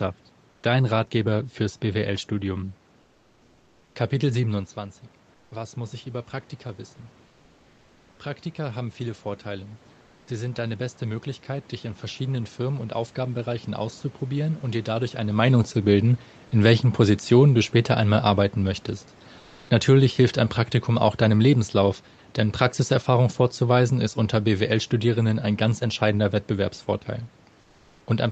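Comfort noise in place of the background at 0.51 to 0.63 s and 5.31 to 5.51 s: in these pauses the real room background gives way to a steady, featureless hiss, about 2 and 4 dB quieter. This is likely Opus discontinuous transmission, where the receiver synthesises noise while the sender is silent. Automatic gain rising from 8.56 to 14.9 s: the gain control judged the input too quiet and slowly lifted it by about 6 dB, so speech and background swell together. Within that stretch, comfort noise again replaces the background at 10.01 to 10.27 s, about 1 dB lower. Later, the same flat substitute noise fills 19.39 to 19.69 s at an unchanged level and 27.61 to 28.07 s, about 4 dB quieter.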